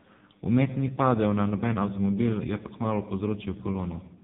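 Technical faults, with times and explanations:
Throughout, AMR narrowband mobile codec: the speech sounds buzzy, thin and synthetic, with nothing above 3.8 kHz, because each frame is rebuilt from a coarse vocal-tract model driven by a few pulses; damage this heavy fits one of AMR-NB's lowest modes, around 5 kbps.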